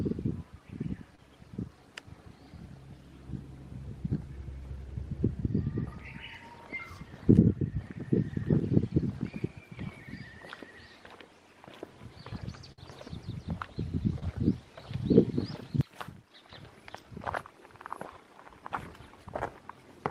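At about 1.15 to 1.19 s there's a short concealed packet loss: roughly 30 ms of audio didn't reach the decoder in time. The receiver covered the hole by stretching out the sound just before it for about 26 ms, then eased back into the real signal. You hear it as a quick smear or wobble. The same thing happens again at about 14.19 to 14.23 s, a bit smaller, with about 20 ms gone and 23 ms of fill.

Between those, at about 12.72 to 12.78 s, there's a burst of packet loss, a longer run where about 50 ms of the stream never arrived. The decoder kept the previous sound going for around 55 ms and pulled the level down as the gap went on, so it comes across as a brief held-then-fading patch. When the audio picks up again, the stretch in between is simply missing.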